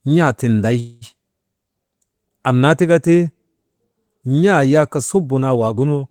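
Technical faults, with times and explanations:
0.79–1.04 s, call audio freeze: the sound stalls into a fading buzz for about 220 ms, likely because delayed packets left the jitter buffer empty. Speech then resumes where it stopped, nothing lost, just 220 ms later. Spectrogram shows smeared horizontal bands; the waveform shows a decaying repeat.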